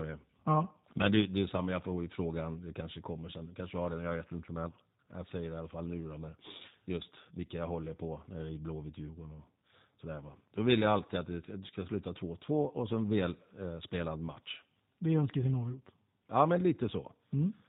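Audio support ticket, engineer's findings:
G.729 codec damage throughout, plainly audible: rough, synthetic speech, hard cutoff near 4 kHz on spectrogram, smeared harmonics from sparse-pulse excitation; fits an 8 kbit/s G.729A stream.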